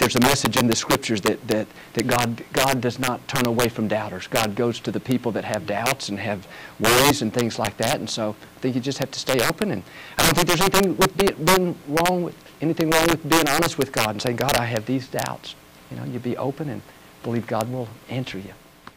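Integer overflow runs through the whole clip: the signal is driven about 14 dB past full scale, and roughly one sample in a hundred wraps to the opposite sign instead of being limited, so every loud peak becomes a violent crack far harsher than clipping.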